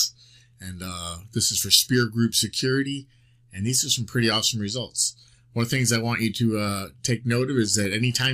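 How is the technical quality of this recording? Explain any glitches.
No glitches or technical faults can be heard here.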